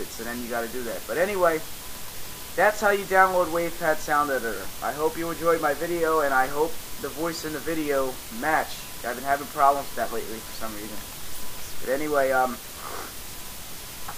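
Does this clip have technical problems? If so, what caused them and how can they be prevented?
No, there are no technical problems to report in this clip. With nothing to trace back to a cause, there is nothing here that needs preventing.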